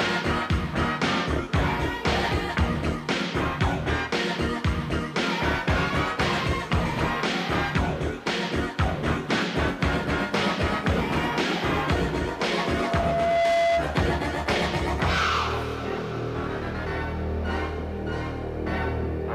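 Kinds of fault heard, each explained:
Loudspeaker feedback squeal: the microphone is hearing its own loudspeaker, and at 677 Hz the loop gain passes unity, so that tone grows on its own. From 12.29 s it swells over roughly a second into a steady squeal about 5 dB above the programme, ending at 13.93 s.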